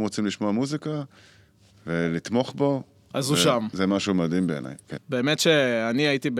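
Word clock ticks, 1.08 to 5.6 s: about four clicks roughly every 1.5 s, as an unlocked receiving clock drifts and drops or repeats one sample.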